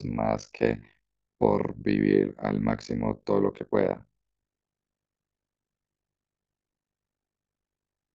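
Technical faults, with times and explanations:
Throughout, overlap-add ripple: the speech carries a harsh, buzzy robotic flutter, its level pumping around 50 times a second with swings of about 60 dB. Overlapping windowed frames were rejoined with gains that don't sum evenly, leaving a deep dip every frame.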